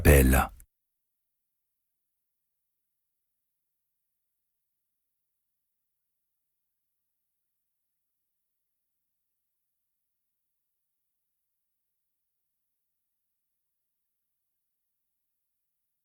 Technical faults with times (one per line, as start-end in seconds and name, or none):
none